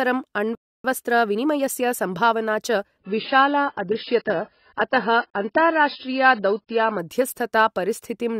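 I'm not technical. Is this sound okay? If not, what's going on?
No. At 0.55 s there is a playback stall. The player most likely ran out of incoming audio, or was briefly held up, so it had nothing to send to your speakers. The result is a sudden silence of about 0.29 seconds, lasting until 0.84 s. The speech stops in mid-flow as if someone pressed pause, and then it carries on.

From 0.84 s to 2.78 s you hear time-compressed catch-up. After the pause the player was behind, so it made up the lost time by trimming tiny slices out of the audio and blending the joins. The speech plays about 1.15 times faster than normal but keeps its normal pitch. It sounds slightly rushed.

From 2.99 s to 6.99 s the player switched to an adaptive stream at a lower bitrate. When the connection slows, the service sends a smaller, lower-quality version of the audio to keep playback going. Here that version keeps nothing above about 5.5 kHz, so the crisp top end of the voice is missing. 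The sound turns dull and smeared or watery. The change happens abruptly and without any gap, then lasts four seconds.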